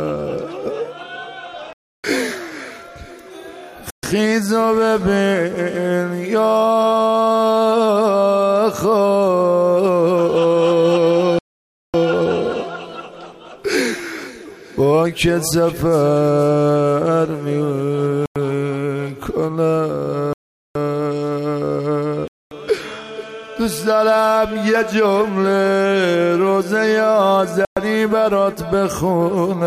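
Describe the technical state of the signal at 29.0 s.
At 29.0 s the signal is intact, with no audible dropout, distortion, glitch or other technical fault.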